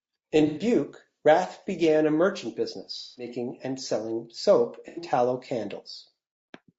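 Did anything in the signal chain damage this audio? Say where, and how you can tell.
Yes, at the codec stage: the speech sounds rough and grainy all the way through, with noise between harmonics, likely low-delay AAC compression (AAC-ELD) at around 32 kbps.

AAC frame loss with concealment at 0.47–0.61 s, 2.99–3.28 s between "began a merchant" and "and selling soap", and 4.88–5.02 s after "and selling soap". Each sounds like a smeared, noisy patch where the decoder patched over missing data.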